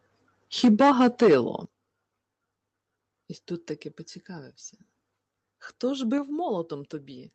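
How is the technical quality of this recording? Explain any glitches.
The recording has two linked level problems: a stretch of hard distortion near the start, and three sudden drops in loudness. The call codec's roll-off, with little energy above about 8 kHz, can also be seen on a spectrogram.

Microphone overload, 0.63 to 1.35 s: peaks ran about 8 dB past the converter's limit, likely because the input volume was set too high. Roughly a sixth of the samples are flattened. The waveform shows squared-off tops, the spectrogram shows smeared broadband harmonics, and the loud syllables sound harsh and crackly.

Microphone volume stepped down, at 0.65, 1.65 and 6.18 s: the level falls by about 4, 9 and 4 dB, likely because the call software cut the input gain after detecting overload. The waveform envelope narrows abruptly, and the spectrogram dims evenly across all frequencies at each point.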